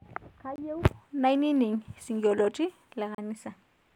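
At 0.56 s and again at 3.15 s the speech drops into a block of digital silence, about 23 ms and 35 ms long, which fits a buffer of around 1024 samples missing its deadline the first time. The signal jumps to zero and back without any fade, so each gap is a short hole. On the waveform it shows as a dead-flat run; on a spectrogram, a blank vertical strip with broadband lines at both edges.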